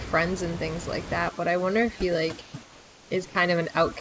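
From 1.29 s to the end, overdone noise removal pushes the background down into twinkling, warbling specks. Unlike a gate, it carves individual frequency bands rather than muting everything.

At 2.42 to 2.54 s and 2.63 to 3.11 s, the room background becomes smooth, featureless hiss, about 2 and 3 dB quieter. This is likely comfort noise in place of the background, synthesised while transmission paused, not a filter change.

At 3.29 to 3.35 s, about 30 ms of speech gives way to that same steady noise, likely sound dropped by the voice detector. It differs from a packet dropout because noise fills the gap instead of silence or a glitch.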